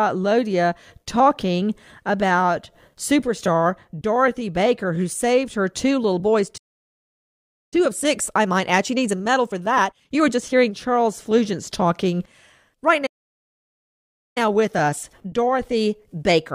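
Speech that cuts out twice with playback stalls: the output goes silent from 6.57 to 7.74 s (about 1.1 s) and from 13.06 to 14.38 s (about 1.3 s), likely because the player ran short of buffered data or its thread was held up. Each gap shows as a flat line on the waveform and an empty vertical band on the spectrogram. After each stall comes time-compressed catch-up, where the player trims its backlog by cutting out and cross-fading short slices. The speech runs about 1.25 times faster from 7.74 to 10.74 s and about 1.15 times faster from 14.38 s to the end, hurried but at unchanged pitch. On the spectrogram the harmonics keep their height while syllables crowd closer together, and the waveform shows tightly packed envelopes.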